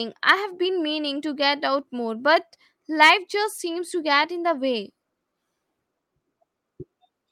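No technical faults are audible.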